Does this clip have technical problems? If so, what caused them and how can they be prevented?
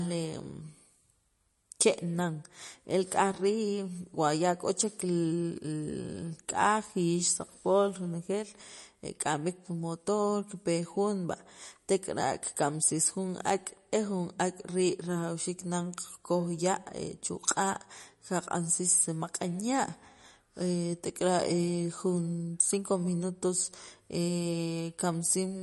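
Yes, throughout there's plainly audible MP3 compression, likely. Treble stops near 11.5 kHz and weak detail swirls, which fits a starved bitrate around 40 kbps. Encode at a higher bitrate, or keep a lossless copy.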